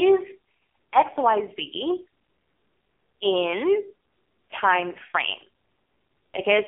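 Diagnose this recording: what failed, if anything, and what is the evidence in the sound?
The failure sits at the codec stage, an AMR narrowband mobile codec applied across the whole clip. The speech is confined to a telephone band of roughly 300 Hz to 3.4 kHz, with nothing above 3.5 kHz, and it carries heavy codec damage: a buzzy, synthetic texture that fits a low rate near 5.9 kbps. A plain band-limiting filter would narrow the sound without that artificial buzz. Here the voice is rebuilt from a coarse vocal-tract model and sparse pulses in each 5 ms.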